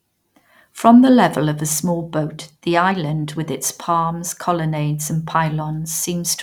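From 2.02 to 3.50 s, after "level of a small" and before "its palms colonnades and", one channel runs about a sample late and the two are summed to mono, causing channel delay (comb filtering). With its first notch near 20 kHz, the speech turns slightly dull at the very top.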